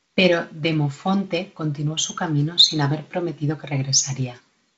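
No technical faults can be heard in this recording.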